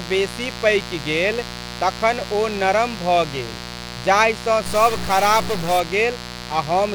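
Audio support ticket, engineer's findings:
Mains buzz, present throughout. Steady raspy buzz sitting roughly 15 dB below the speech, built from 60 Hz harmonics extending into the kilohertz range. Probable component: dimmer, rectifier or missing shield admitting switching spikes twice per mains cycle.

Stuck bit, 4.66 to 5.80 s. Distortion and noise added to the speech, continuing through gaps because the bit flips with the sign of small values. Likely a stuck data bit from a broken line or converter, offsetting about half the samples by that bit's weight.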